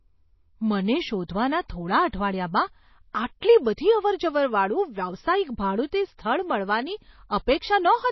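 Speech, and it has clearly been through heavy MP3 compression, likely at a very low bitrate (something around 24 kbps would fit what you hear). The treble stops dead at about 5.8 kHz, so the s sounds lose their sparkle. The codec damage is plainly audible throughout: weak frequency lines are dropped and come back from frame to frame, giving the sound that watery, swirly quality, with a metallic edge on the sibilants and smeared attacks. There's also a spot of pre-echo from 3.40 to 3.42 s. A sharp attack lands late in a transform block, and the quantisation noise sized for the loud part spreads back over the quiet moment before it, so you get a short hiss of about 21 ms just ahead of the onset, and the attack itself sounds softened.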